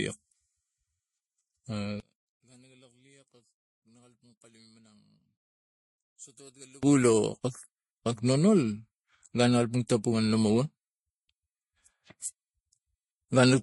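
Throughout, the speech sounds dull and smeared, with nothing above 11.3 kHz and layered, swirly artefacts, which points to transcoding between lossy codecs, likely MP3 at roughly 48 kbit/s then Vorbis.

From 2.0 to 6.83 s, the speech drops by about 30 dB to a faint residue, likely one channel inverted, so the shared centre cancels when summed to mono.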